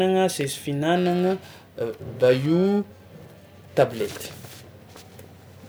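Speech, and from about 0.96 s right to the end there's periodic clock jitter. Something is wobbling the converter's clock at around 1 kHz, so every component picks up sidebands spaced about that far either side, worst on the higher frequencies. You get a rough, metallic edge that drops out in the pauses.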